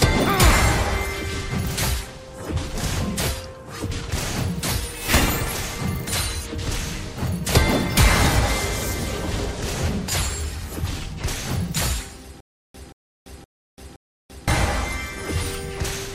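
From 12.40 to 14.48 s there is stutter with silent gaps. A 180 ms burst repeats four times, each followed by 339 ms of silence. A stalled stream likely caused it.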